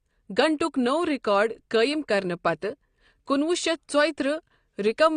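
AAC compression runs through the whole of this speech clip: nothing is present above 9.6 kHz, and the audible smearing points to a low bitrate, which fits about 32 kbps AAC-LC as the likely cause. At that rate the encoder discards upper bands and coarsely quantises the rest.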